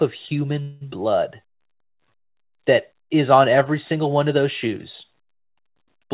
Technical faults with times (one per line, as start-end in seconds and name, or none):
0.62-0.83 call audio freeze
0.91-0.94 skip ahead
1.40-2.53 jitter buffer slow-down